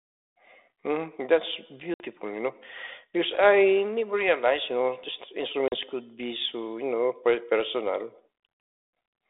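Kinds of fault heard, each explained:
Packet loss on an ADPCM call: the speech cuts to abrupt silence twice, a gap of about 60 ms near 1.94 s just before "you know because" and about 40 ms at 5.68 s after "realized you know just". Each gap fits two or three lost packets. When the sound resumes, the receiving decoder's predictor and step size briefly disagree with the sender's, so the speech comes back slightly distorted, and it settles within tens of milliseconds. A simple dropout would restart cleanly, without that disturbance.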